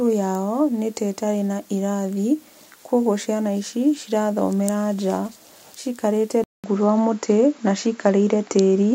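Speech that, from 6.44 s, turns duller after a 0.2 s gap, losing everything above 7.6 kHz and shifting level by about 5 dB; likely an input switched to a poorer device.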